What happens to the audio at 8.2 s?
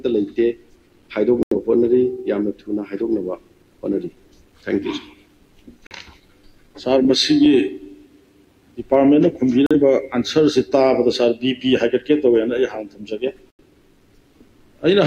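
Nothing goes wrong at 8.2 s; the audio plays through that moment intact, with no dropout, glitch or distortion.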